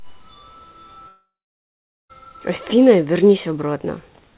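From 1.08 s to 2.11 s the speech breaks off. The last sound is stretched into a fading buzz, then about 0.82 s of near-silence, and speech resumes with a stretch missing: likely a long network dropout, with the receiver concealing the gap. Throughout, nothing sounds above 4 kHz, which fits a 64 kbps G.711 mu-law call path.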